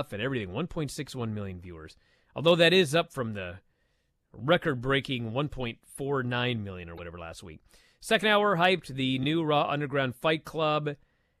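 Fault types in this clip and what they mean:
Damaged data in a compressed stream: at 6.94 s a short burst of corrupted bytes makes the decoder misread frames and hunt for the next valid header, giving a glitch lasting about 58 ms.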